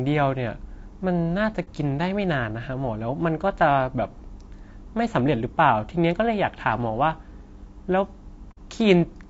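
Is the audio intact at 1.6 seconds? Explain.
No. From 1.64 to 1.68 s there is AAC frame loss with muting: one lost frame's spectrum was zeroed, so overlapping windows fade the sound out and back in, leaving a brief dip. Throughout, the sound is rough and grainy, with noise between harmonics, likely from low-delay AAC compression (AAC-ELD) at a bitrate around 32 kbps, as steady graininess rather than a gap.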